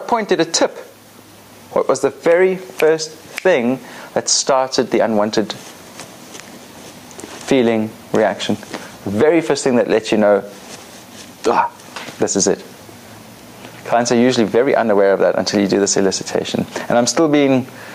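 Throughout, the gain ducks by around 10 dB under each loud sound, classic gain pumping, likely from excessive gain driving a fast limiter.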